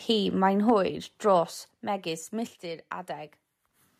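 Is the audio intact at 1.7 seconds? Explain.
No. At 1.71 s the speech and its background drop together by about 5 dB in one abrupt step, a microphone volume stepped down event. The likely cause is the call software cutting the device's input gain after judging the microphone too hot.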